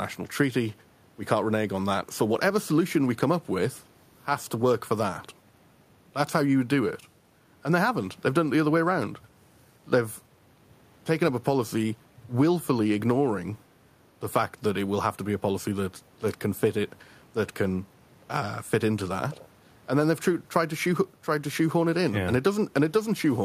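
Listening to this speech recording, nothing technical stood out at any point.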